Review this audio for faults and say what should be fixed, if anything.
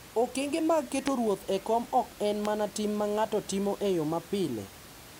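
Loud pops at 1.08 s and 2.45 s, about 20 dB and 15 dB above the speech, likely voltage spikes from a connector, switch or static. Secure connectors, mute before switching, and ground the setup to prevent them.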